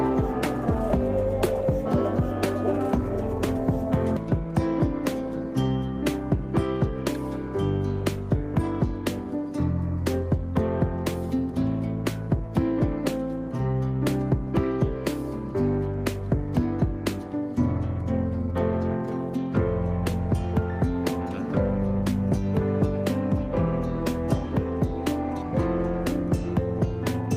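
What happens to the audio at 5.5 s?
Nothing goes wrong at 5.5 s; the audio plays through that moment intact, with no dropout, click or other fault.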